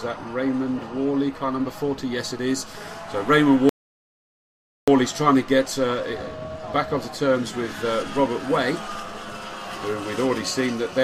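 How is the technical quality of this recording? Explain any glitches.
One glitch stands out: a playback stall from 3.69 to 4.88 s. The sound cuts off abruptly in mid-flow and the output stays completely silent for 1.18 s before the audio resumes. The likely cause is the player running out of buffered data or its audio thread being blocked, leaving nothing to send to the output until it recovered.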